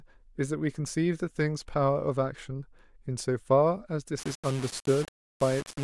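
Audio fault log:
4.19–5.83 s, low bit depth without dither: likely rounding to very few levels, fitting about 5 bits, so grainy, signal-following distortion sits roughly 15 dB below the speech, gritty on quiet parts.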